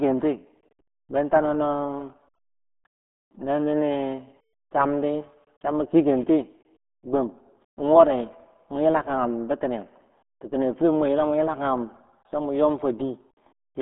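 RealAudio 14.4 codec damage runs through the whole of this speech clip. The sound is confined to a narrow band of roughly 200 Hz to 3.6 kHz, with nothing at all above 3.8 kHz, so sibilants and consonant detail are gone and the voice sounds muffled. The heavy gargling, smeared texture comes from the coder's very low data rate, which fits an 8 kbit/s dial-up-era speech codec like RealAudio 1.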